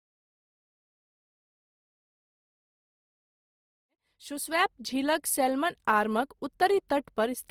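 Opus compression runs throughout the speech, likely a low-rate encode near 24 kbps in music mode. Full bandwidth survives, but filled-in bands make tones grainy and rough.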